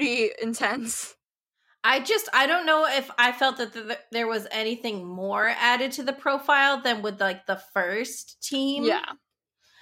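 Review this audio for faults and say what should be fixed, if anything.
No faults found; nothing here needs fixing.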